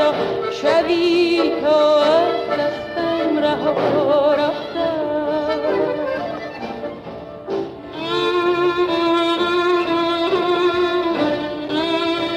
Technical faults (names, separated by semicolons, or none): none